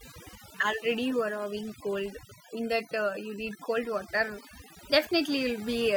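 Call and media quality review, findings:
Overdone noise removal, throughout. Background near-silent with twinkling specks. Probable component: noise suppressor set too aggressive, gating bands near its noise estimate, quiet speech detail lost too. Spectrogram: isolated bright flecks on black floor, speech harmonics patchy, ragged edges.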